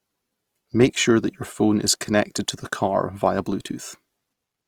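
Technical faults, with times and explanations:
throughout, Opus compression: the speech turns rough and grainy rather than swirling as MP3 does, because band energy is kept and gaps are filled with noise. It stays bright up to 20.4 kHz, not muffled, so this is likely Opus music mode at about 24 kbps.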